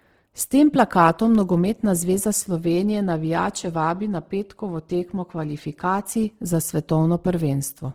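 Throughout the speech the audio is grainy and rough, with noisy texture replacing clean tonal detail while the full bandwidth stays intact. This is likely Opus compression in its CELT music mode, fitting roughly 16 kbps, where starved bands are filled with folded or noise energy.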